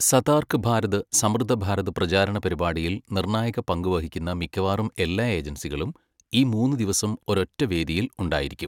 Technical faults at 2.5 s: none

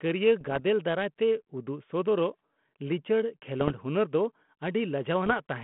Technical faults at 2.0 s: none

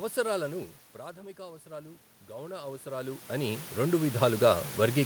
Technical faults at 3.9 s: automatic gain rising

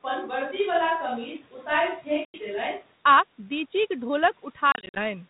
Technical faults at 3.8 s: none

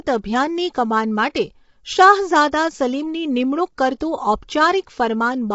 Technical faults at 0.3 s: low-delay AAC compression

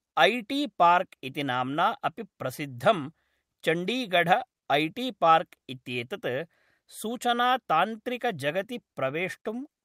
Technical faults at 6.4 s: none

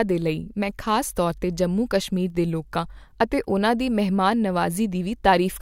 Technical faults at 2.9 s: none

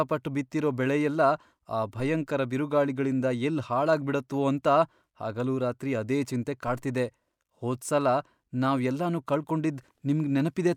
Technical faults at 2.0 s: DC step

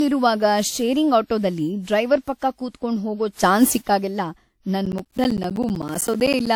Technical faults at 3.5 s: generation loss; sudden gain jump

